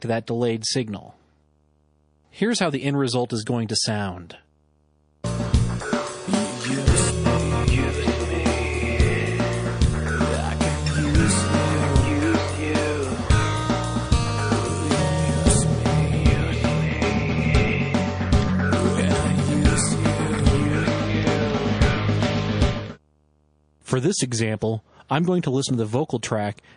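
A video or display buzz runs throughout at 75 Hz, the picture's field rate, with hash above it, sitting roughly 40 dB below the signal, where a screen or cable couples into the audio path.

Also throughout, the sound turns watery and swirly, with metallic chirps on sibilants and smeared attacks, likely from MP3 compression at a rate that fits about 40 kbps.

From 24.59 to 24.62 s, pre-echo: quantisation noise spread across the 52 ms transform window without short blocks smears about 26 ms of hiss, about 12 dB up, ahead of a sharp attack, softening it.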